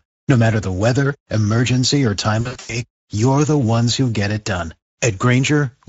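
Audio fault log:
throughout: Speex codec. The speech sounds hoarse and grainy throughout, with the upper band reduced to a noise-like hiss. Speex is a CELP codec, and at a middle setting near 17 kbps it has too few bits to reproduce the excitation accurately.
2.41 to 2.83 s: VoIP packet loss concealed by the speech codec. After "the weather emergency or", the sound smears into a buzzy tone or coloured noise that fades, until "you're the ones who". Roughly 220 ms of audio appears lost across about 280 ms, with the longest gap near 100 ms. The decoder filled each gap by extending its last pitch and filter at falling gain. The audio stays weak for a moment after packets return.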